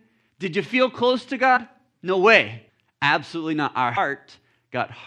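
Compressed frames skipped in this speech clip at 1.56–1.58 s, 2.68 s and 3.96 s: the audio jumps forward by about 70 ms, then about 200 ms twice, steps that fit a 26.1 ms frame.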